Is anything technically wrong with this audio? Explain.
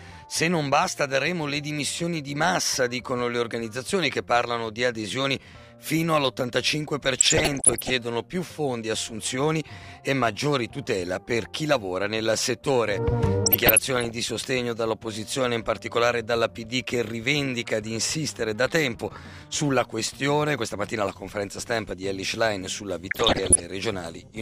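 Yes. There is DAB burbling at 7.18 to 7.90 s, 13.45 to 14.11 s and 23.11 to 23.62 s. Bit errors from weak reception, around one percent in the first patch, half a percent in the second and somewhat under one percent in the last, get past the error correction into the MP2 data. The patches span about 30, 30 and 22 frames. Corrupted samples produce short noise blips confined to single sub-bands, giving a watery, bubbling burble, and any corrupted scale factors make sub-bands jump in level for up to a frame.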